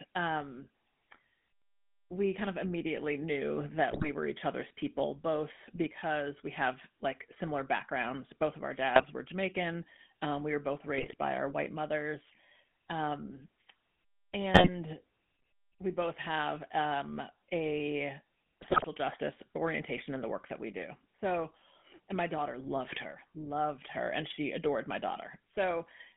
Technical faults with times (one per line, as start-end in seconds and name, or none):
0.00-26.16 GSM full-rate codec
3.90-4.09 GSM bit errors
8.96-9.05 GSM bit errors
10.98-11.14 GSM bit errors
14.54-14.70 GSM bit errors
18.62-18.85 GSM bit errors